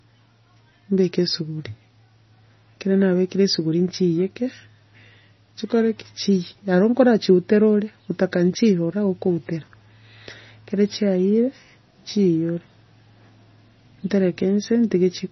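Throughout, watery swirling and chirpy s sounds point to likely MP3 compression near 24 kbps. A spectrogram shows a hard ceiling at 5.9 kHz and flickering holes below it.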